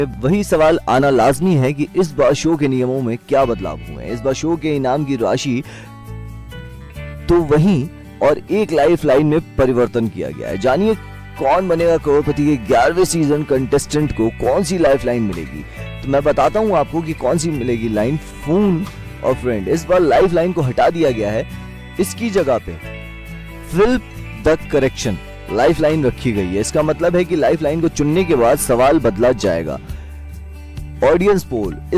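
No technical faults are audible.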